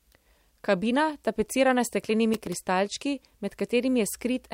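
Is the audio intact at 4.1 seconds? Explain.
Yes, the audio is intact at 4.1 seconds, with no dropout, click, distortion or other fault audible at that moment.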